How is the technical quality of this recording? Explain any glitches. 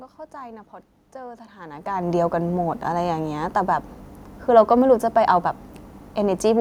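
No glitches can be heard in this speech recording. The background noise of the room sits underneath, and the level change at about one and a half seconds is the talker's distance to the microphone shifting.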